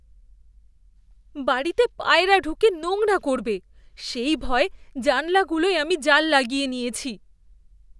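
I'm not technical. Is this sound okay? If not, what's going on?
Yes, it's fine, nothing in this recording points to a technical problem, so you can relax about it.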